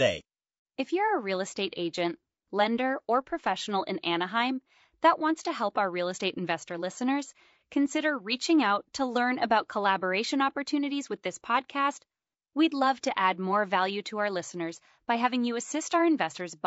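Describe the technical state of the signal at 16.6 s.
At 16.6 s the speech is rough and grainy, with noise filling the gaps between harmonics and a thin, synthetic-sounding top band, as it is throughout. This is likely low-delay AAC compression, which codes about 500 frequency lines a frame with a low-delay window, consistent with about 32 kbps.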